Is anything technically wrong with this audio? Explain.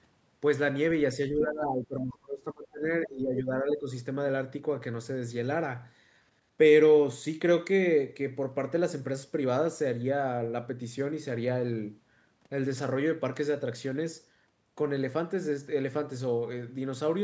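Yes. From 1.3 to 2.86 s the speech sinks sharply, by roughly 25 dB at its deepest, and from 3.06 to 3.9 s it dips again, more gently, by about 10 dB. This is speech suppressed in double talk, likely the echo canceller muting the talker while the far side also spoke. Between 3.35 and 3.4 s a brief scrap of another voice leaks through, about 10 dB below the speech, likely the other side's voice escaping from the loudspeaker into the microphone.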